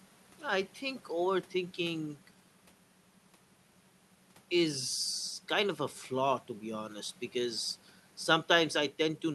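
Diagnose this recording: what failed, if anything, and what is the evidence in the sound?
Nothing failed: the recording gives no evidence in the sound of any fault.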